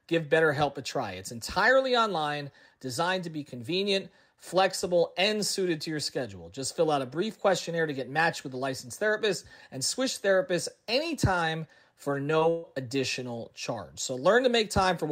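At 12.39 to 12.43 s, right after "switch therapists anytime for", there's a short concealed packet loss. About 20 ms never arrived, so the decoder extended the last sound, leaving a quick smear. Then at 12.49 to 12.65 s comes a burst of packet loss. About 140 ms went missing and was patched with a fading continuation, giving a held buzz or hiss before "additional charge".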